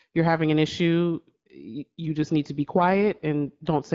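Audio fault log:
2.82–3.86 s, AMR rate drop: speech turns rough and synthetic with no gap or band loss, which points to the AMR-WB codec stepping down from 12.65 to 8.85 kbit/s.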